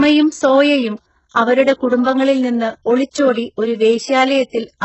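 Throughout, the speech's s sounds are gritty and lispy, likely from heavy HE-AAC compression; a spectrogram shows repeated, copied-looking upper bands and nothing above 8 kHz.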